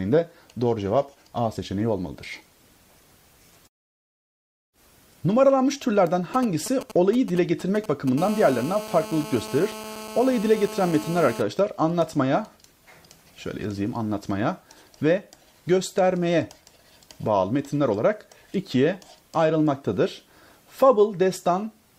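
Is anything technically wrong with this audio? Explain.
Yes, a nearby 2G phone interferes twice. From 6.34 to 8.09 s there are GSM signalling bursts: rectified radio bursts give galloping dit-dit ticks and short 217 Hz buzzes, roughly 15 dB below the signal. From 8.18 to 11.42 s comes GSM phone buzz: call-mode transmission pulsing 217 times a second, rectified into a steady, raspy, harmonic-rich 217 Hz buzz about 14 dB below the signal.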